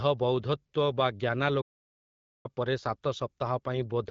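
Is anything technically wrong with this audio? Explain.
Yes, there is a playback stall. At 1.61 s the speech cuts off mid-flow and the output falls completely silent for about 830 ms, until 2.46 s, when the sound resumes. The likely cause is that the player ran out of buffered data, or its playback thread was briefly blocked, so nothing reached the output until it recovered. The gap is silence rather than noise or a click, and the speech picks up again after it.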